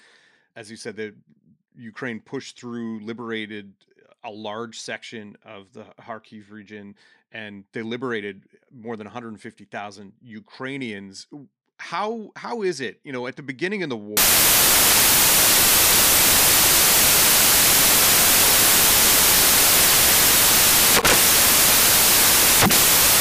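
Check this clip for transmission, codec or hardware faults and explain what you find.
One fault is present. From 14.17 s to the end, right after "the beginning of the", samples are built from the wrong bytes. Misassembled bytes turn low bits into the loud part of each value, giving loud, harsh broadband noise.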